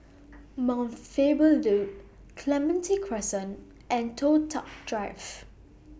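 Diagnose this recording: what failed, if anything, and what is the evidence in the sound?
Nothing in the chain seems to have gone wrong here, since the speech comes across steady and intact with nothing in it pointing to a failure at any stage.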